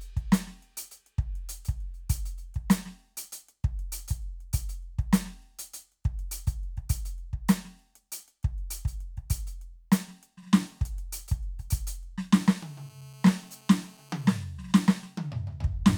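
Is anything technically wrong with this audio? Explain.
Yes. This music clip has GSM phone buzz from 12.37 s to 14.36 s. A 2G phone on a call nearby sends its radio bursts about 217 times a second, and the audio circuitry rectifies those pulses into the signal path. The result is a hard, raspy buzz at 217 Hz with a dense stack of harmonics, unrelated to the music and nearly steady across the two seconds, sitting about 29 dB below the programme level.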